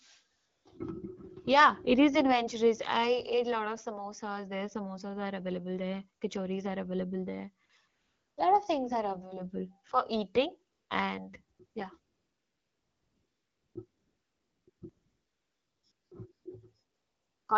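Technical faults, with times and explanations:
0.37 to 17.47 s, AMR comfort noise: Thirteen gaps, from 20 ms up to 1.76 s, the longest at 11.99 to 13.75 s and most of them after 10.7 s. The phone judged the talker silent and stopped sending speech frames. The receiver then generated noise from a rough summary of the background's level and spectrum. So the real background drops out, and a smooth, steady hiss switches in and out around the speech. The speech itself is clear and wideband, which fits AMR-WB at about 12.65 kbit/s.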